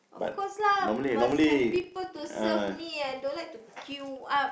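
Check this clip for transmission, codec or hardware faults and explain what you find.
One processing fault runs through the whole speech recording: a filter restarted on every block. The filter discards its internal state at each block boundary and begins again from silence. Each block therefore opens with a small transient, producing a 25 Hz buzz of ticks, which fits 40 ms blocks, louder where the speech is louder. A waveform shows evenly spaced spikes every 40 ms. A spectrogram shows thin vertical lines at that spacing and a 25 Hz harmonic comb.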